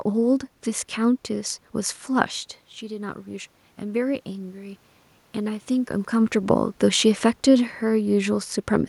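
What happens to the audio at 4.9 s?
At 4.9 s you're in the middle of an automatic gain rising stretch that runs from 2.8 to 5.7 s. The talker had backed off around 2 s, so the level at the mic fell by about 11 dB, and the gain control responded by slowly pushing its gain up, by about 4 dB in total. The voice and the room noise swell up together over those few seconds.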